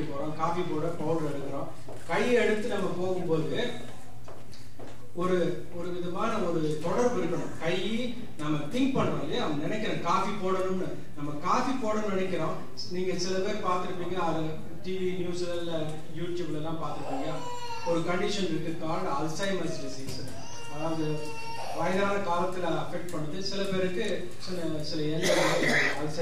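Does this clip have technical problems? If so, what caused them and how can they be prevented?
Yes. A DC offset of about -30 dBFS runs throughout: nothing audible as such, but the waveform sits shifted off zero, wasting headroom and adding static sub-bass energy. A high-pass filter at a few hertz during recording or mastering removes it.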